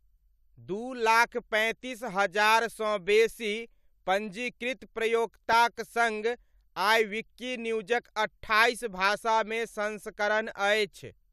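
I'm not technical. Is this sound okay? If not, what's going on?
No. At 5.53 seconds there is a tiny glitch. It is a corrupt frame decoded. Speech like this is stored in small compressed chunks called frames. A couple of those chunks got damaged, and the player used them anyway. The broken data put sound at the wrong pitches for a split second. You hear it as a brief blip or squeak, shorter than a blink.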